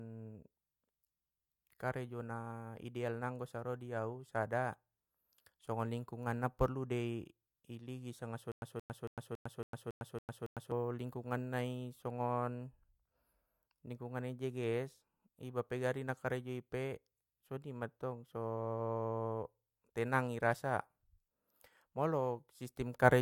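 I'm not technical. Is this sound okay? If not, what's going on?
No. From 8.52 to 10.72 seconds there is a stutter with silent gaps. The same short piece of speech, about 0.17 seconds long, replays eight times, each followed by 0.10 seconds of silence. Playback likely stalled. The speech that belonged there is lost.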